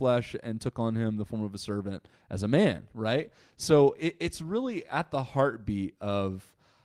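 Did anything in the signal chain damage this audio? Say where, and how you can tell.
Yes: a call bitrate drop at the codec stage, from 3.18 s to 6.17 s. The speech turns coarser and rougher, worst for about 1.7 s, which fits the call's bandwidth estimate falling and the encoder being pushed from 32 kbps to 17 kbps.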